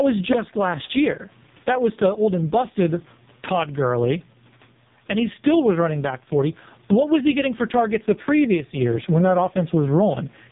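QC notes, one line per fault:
throughout: gain pumping. The gain swings by roughly 15 dB. The room noise sits about 41 dB below the speech and is part of the recording. The likely cause is input gain set far too high, with a fast limiter or compressor clamping down on every peak. This squashes loud and soft passages toward one level.
throughout: AMR narrowband mobile codec. The audio has nothing above 3.8 kHz, so it sounds boxed-in and telephone-like. The speech is heavily damaged. It sounds buzzy and synthetic, and the background between phrases warbles and swirls. That fits AMR-NB at its lowest mode, around 4.75 kbps. At that rate, the vocal-tract model and its few excitation pulses per subframe cannot carry much detail. Anything that is not clean voice comes out smeared into artificial-sounding texture.
0.33 s: repeated buffer. Just before "last year", a very short piece of audio plays three times back to back, with a hard join at each repeat. 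Because each segment is tiny, this comes across as a brief click or buzz rather than an audible stutter. The length of the repeated piece fits a buffer of about 5 ms. New data did not arrive in time, so the device replayed the last buffer twice. No audio appears to be lost, since the stream resumes where it left off.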